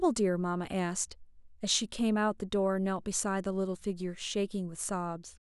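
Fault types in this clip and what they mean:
Dropped samples: there's a single sharp click at about 2.96 s, a thin vertical line across the spectrum. It's likely down to a couple of samples going missing, so the waveform jumps straight to a later value. The gap is far too brief to remove any sound.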